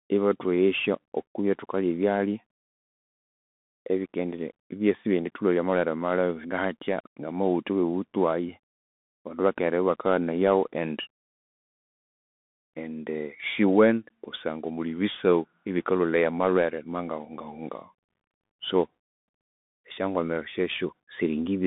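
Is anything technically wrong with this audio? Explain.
Yes. The whole clip carries Bluetooth CVSD headset codec damage. Each sample is coded as a single up-or-down step, which fits a 64 kbps CVSD link. The speech sits within a 200 Hz to 3.6 kHz band, with nothing above 3.8 kHz. S sounds sound scratchy over a grainy hiss.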